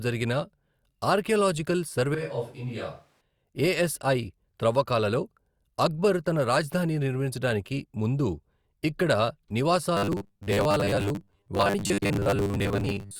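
From 2.15 to 3.21 s the close microphone likely dropped out, leaving a switch to a distant microphone. The speech turns suddenly roomy and hollow, thinner in the bass, about 5 dB quieter, with room noise around 35 dB below it, then snaps back.

From 9.97 to 13.19 s new audio likely arrived too slowly, so the software kept repeating the last short buffer. The result is robotic sound from repeated short buffers: about half the sound is repeats, forcing a rigid, metallic 100 Hz buzz, which fits a 10 ms buffer.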